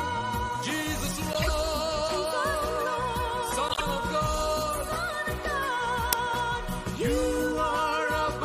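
Corrupt frame decoded, at 1.33 to 1.49 s and again at 3.68 to 3.82 s: damaged bits in a handful of compressed frames, around four in the first case and three in the second, went through the decoder unchecked. Misread gains and codes put energy into the wrong frequency bands, so each stretch comes out as a brief chirpy, noisy blip rising to roughly -15 dBFS and lasting about as long as the frames that were hit.

Uninitialised buffer, at 6.13 s: a block was sent to the output before any audio had been written into it, so whatever data was left in memory played as samples. The result is a sudden, harsh snap of digital noise, about 2.9 ms long, which fits a 128-sample block. It is over almost before it registers, and it stands out sharply against the audio around it.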